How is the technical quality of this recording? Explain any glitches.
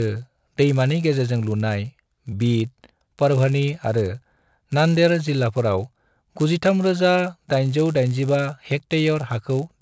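The recording carries a steady low buzz under the speech for its whole length, present only while there is signal and gone in the pauses. It repeats at 100 Hz, a click every 10 ms, fusing into a rough drone rather than separate ticks. This is a resampler restarted on every block: each 10 ms chunk was converted on its own, likely from 44.1 kHz to 16 kHz, so the filter lacked true neighbouring samples and left a small error at every block edge.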